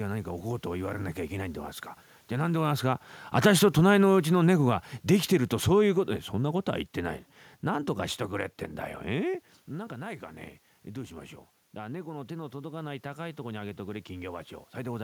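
From 2.32 to 6.63 s the speech and the room noise behind it sink together by about 7 dB over roughly four seconds. This is automatic gain falling: around the time the talker shifts position near 2.5 s, the gain control judges the input too loud, or its background noise too strong, and lowers its gain gradually.

From 10.86 to 14.52 s the speech and background swell together by about 4 dB. This is automatic gain rising: the talker moved around 9 s, the input fell by about 11 dB, and the gain control slowly raised its gain to compensate.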